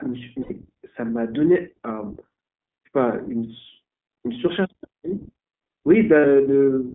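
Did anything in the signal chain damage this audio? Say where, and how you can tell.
Yes. At the codec stage, the whole clip carries iLBC coding. The speech is confined to roughly 200 Hz to 3.5 kHz and has the slightly rough, synthetic texture of an excitation-coded narrowband codec. The call's microphone processing trims only the deepest bass, so the missing top end comes from the codec. The damage is plainly audible and fits iLBC's 15.2 kbps mode with 20 ms frames, each coded independently.

At the network stage, lost iLBC frames show up twice: 0.42 to 0.52 s, lasting 80 ms, and 6.20 to 6.25 s, lasting 40 ms. In each gap the sound turns into a held, faintly buzzy vowel. That is the decoder repeating the last pitch cycle mixed with noise while packets are missing. The durations fit four and two lost 20 ms frames. Because the frames stand alone, the voice is right again almost at once after each gap.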